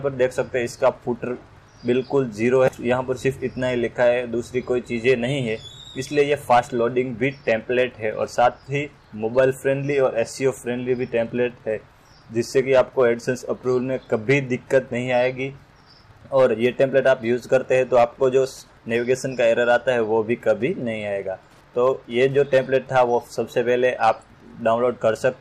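Wi-Fi interference runs throughout: a nearby radio's 102.4 ms beacon is rectified into faint ticks, about 40 dB down, seen as evenly spaced vertical spectrogram lines.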